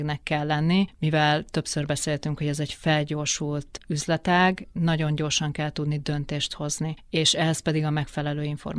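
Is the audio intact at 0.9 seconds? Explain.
Yes, the audio is intact at 0.9 seconds, with the speech running cleanly through that moment and no dropout, click, glitch or other fault to be heard there.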